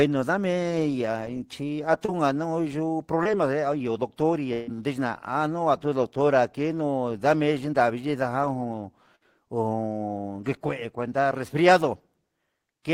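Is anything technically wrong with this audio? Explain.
Yes. Four moments of network packet loss, concealed by the receiver, break up this speech.

Short concealed packet loss occurs at 2.05 to 2.18 s and at 3.23 to 3.27 s. About 20 ms of audio each time arrived too late to decode, and the receiver bridged the hole by extending the preceding sound, leaving a brief smear or wobble. At 2.05 s the patch runs slightly long, adding roughly 10 ms.

A burst of packet loss hits at 4.53 to 4.69 s, where about 140 ms went missing, and again at 9.15 to 9.23 s, losing about 60 ms. The receiver stretched the last sound and faded it, producing a held buzz or dying hiss, then jumped ahead with that stretch of speech gone.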